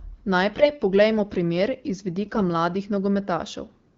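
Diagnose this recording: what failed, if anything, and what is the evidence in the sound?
AMR bit errors on the radio link. Speech turns hoarse and gargly from 0.53 to 0.71 s, just before "poglejmo primer iz", and again from 2.24 to 2.42 s, right after it. Flipped low-protection bits misplaced excitation pulses and skewed gain and spectrum values. The first burst sounds much harsher.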